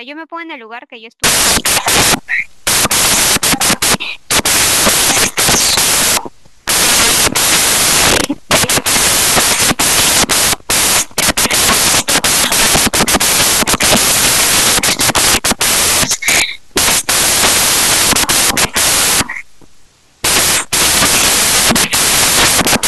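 Speech clip where, from 1.24 s to the end, samples built from the wrong bytes turn the sound into loud white noise and a flat full-band spectrogram.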